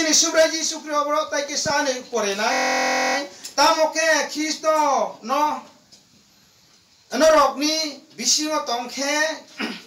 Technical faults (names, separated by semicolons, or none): system hang loop